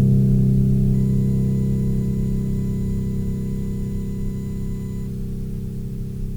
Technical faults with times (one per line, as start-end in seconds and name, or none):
0.94-5.07 USB whine